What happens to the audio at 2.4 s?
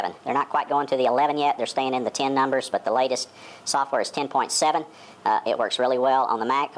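At 2.4 s the audio is being played at the wrong sample rate, as it is for the whole clip. The rise fits material recorded at 16 kHz but played back at 22 kHz without conversion, so everything runs 1.38 times fast and about 5.5 semitones high, sounding hurried and shrill.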